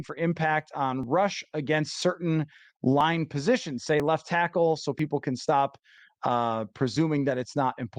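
Overlap between stream segments: consecutive one-second segments carried overlapping time stamps, so the player trimmed 4 to 16 milliseconds of speech that was never actually doubled. The waveform jumps each time, giving a tiny click or skip at 1.03, 2.02, 3.01, 4.00, 4.99, 5.98 and 6.96 s.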